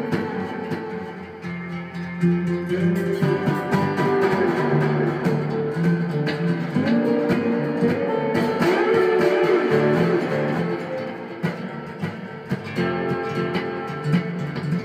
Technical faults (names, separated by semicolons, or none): doubled audio track